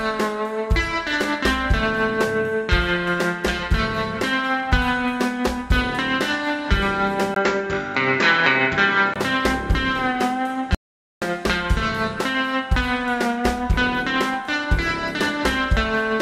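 From 7.34 s to 9.16 s the sound turns duller and boxier, with everything above 7.6 kHz gone, a brief 20 ms silence right at the switch, and a faint new background noise sitting well below the signal. Loudness stays roughly the same. This points to an input switched to a poorer device, likely a change to another microphone or a headset's call profile, whose narrower band and different noise floor replace the original path until the sound clears again.

At 10.75 s the audio cuts out completely and returns at 11.22 s, leaving a 472 ms gap of silence with no room tone underneath. This is an audio dropout to silence, likely caused by the input being lost through a disconnect, a failed link or a momentary mute while the recorder kept writing silence. Whatever occurred during that half-second is missing from the recording.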